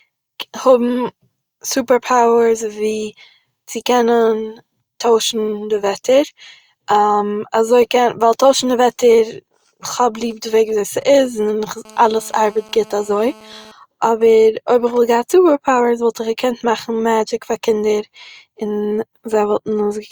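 From 10.22 s to 11.74 s, GSM signalling bursts break into the speech. A 2G handset close to the recording chain is exchanging short control transmissions, and the audio circuitry rectifies the radio pulses into sound: a galloping dit-dit-dit of ticks and brief buzzes at the 217 Hz burst rate, sitting roughly 25 dB under the speech. On a spectrogram these appear as short, clustered vertical stacks of harmonics on 217 Hz spacing. The waveform shows matching packets of sharp, evenly spaced spikes.

At 11.85 s the pattern turns into continuous GSM phone buzz, lasting until 13.72 s. The handset has moved into a call and now transmits its 217 Hz bursts without a break. The rectified pulses give a hard, raspy buzz about 26 dB below the speech, with no connection to what is being said. A spectrogram shows unbroken horizontal lines at 217 Hz and its many multiples, reaching high up the range. In the waveform, a regular comb of spikes rides on the speech throughout.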